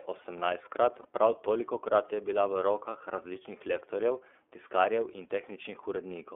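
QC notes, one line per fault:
throughout: iLBC codec. The speech is confined to a narrowband line of 300 Hz to 3.4 kHz, with clearly audible rough, slightly synthetic coloration. Each 30 ms frame's excitation is coded independently, and the sound fits iLBC's 13.33 kbps mode.
1.02–1.05 s: lost iLBC frames. A brief 30 ms held, faintly buzzy vowel-like fill appears just before "prav tolikokrat je bila". It fits a single lost frame concealed by repeating the last pitch cycle with noise. Speech recovers immediately because frames decode independently.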